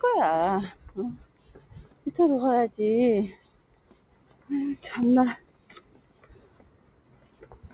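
From the start, a speech-tuned noise suppressor applied to music or sounds keeps riding the level, with swings of about 20 dB. Onsets pass while sustained parts and tails sink, so the audio pumps and thins.

At 1.26–1.41 s and 1.89–2.05 s, the suppressor cuts sounds by about 6 dB. Longer cuts of about 7 dB follow at 3.58–4.48 s and 5.44–7.44 s, where fading portions are pulled down and decays end early. The attacks mostly come through. Throughout, nothing sits above 4 kHz, which fits the G.711 call codec.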